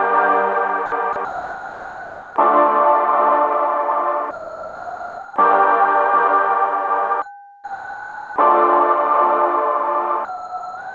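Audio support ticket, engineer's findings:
Sound dropped by the voice detector, sound replaced by steady comfort noise at 0.86–0.92 s, 1.13–1.16 s, 1.25–2.36 s, 4.31–5.36 s, 7.22–8.36 s and 10.25 s to the end. The likely cause is the sender's detector misjudging sound as background. On the waveform, envelope collapses to a flat noise floor. On the spectrogram, uniform hiss blocks sit below the G.722 ceiling at 8 kHz.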